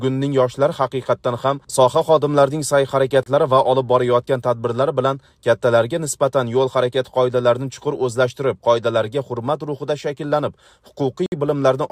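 Timestamps of adjacent 4-second stream segments fail to meet twice, a gap between stream segments that the player fills with silence. The audio breaks into hard-edged holes at 3.23 s, lasting 31 ms, and at 11.26 s, lasting 58 ms, with no sound lost.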